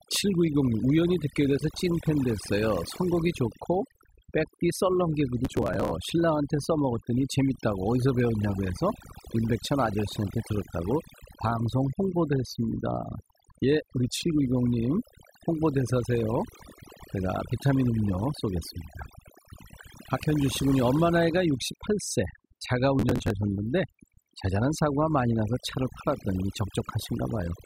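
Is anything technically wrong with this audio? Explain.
Yes. Two faults are audible.

Overdone noise removal runs through the whole clip. A noise reduction stage was set too aggressively, so it pulls individual frequency bands down or out whenever they sit close to its noise estimate, and the quieter parts of the speech are removed along with the noise. The background drops and breaks up into twinkling specks.

Processor overload crackle appears from 5.45 to 5.91 s and again from 22.99 to 23.31 s. In each burst the processor fails to deliver a long run of small audio buffers on time, a few dozen of them, which fits buffers of around 5 ms. The missed buffers are skipped rather than filled, leaving many tiny hard-edged gaps. These combine into a gritty tearing crackle over the speech that ends once the load clears.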